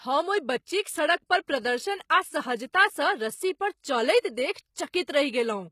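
From start to finish the speech carries plainly audible codec damage, and nothing comes through above about 14.9 kHz. That pattern points to HE-AAC compression as the likely cause, at a low bitrate, which would fit something around 20 kbps. Only the lower band is really coded. The treble is rebuilt by copying lower bands upward under a coarse envelope, so its harmonics don't line up with those below, and that colours the top end of the speech.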